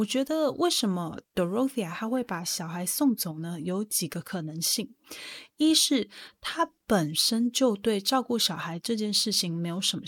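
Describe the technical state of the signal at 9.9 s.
At 9.9 s the speech signal is intact, with no technical fault audible at that moment.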